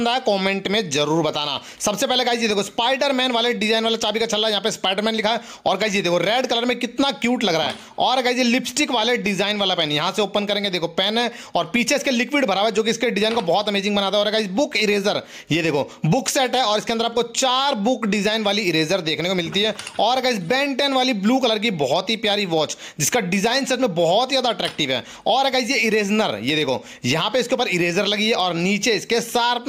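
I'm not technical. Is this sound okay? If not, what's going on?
No. All the way through, loud and soft parts end up closer in level than they should, so everything sounds squashed. This is gain pumping, likely from the microphone level being set far too high and an automatic limiter repeatedly pulling it down hard.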